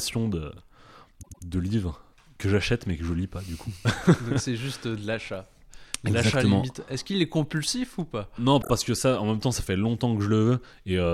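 Speech with two stutters caused by repeated frames. At 1.22 to 1.43 s, just before "de livres que j'achète", a 104.5 ms block (consistent with four compressed frames) plays twice more, adding 209 ms. At 8.61 to 8.70 s, before "que ça en même", a 26.1 ms block repeats three extra times, adding 78.4 ms. The repeats are exact copies on block boundaries, not decaying echoes or gaps from dropout.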